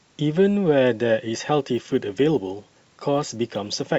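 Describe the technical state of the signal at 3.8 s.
At 3.8 s the speech carries a resampler restarted on every block fault, running from 1.45 s to the end. Each 10 ms block was converted on its own, which fits a 44.1 kHz to 48 kHz conversion, so every block edge gets a small error, heard as a 100 Hz buzz. Unlike mains hum, it disappears in silence.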